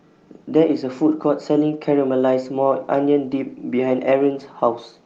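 Nothing goes wrong anywhere in this speech, which has just come over an ordinary call connection whose codec trims the top end at around 12 kHz.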